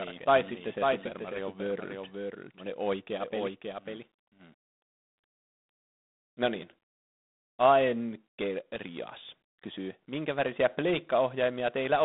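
A harsh, rasping hiss rides on the speech throughout and rises and falls with its level, while the sound is confined to a telephone band of roughly 200 Hz to 3.7 kHz, with nothing above 3.9 kHz. The damage is plainly audible and fits G.726 ADPCM at 24 kbit/s, where too few bits per sample are left to code the difference from the adaptive prediction. From the very start until 4.54 s, a second full-band copy of the speech trails roughly half a second behind the original, a few decibels quieter, with no decay or room colour. It stops abruptly at 4.54 s, a doubled audio track most likely caused by the same audio being captured again through a slower path and mixed back in.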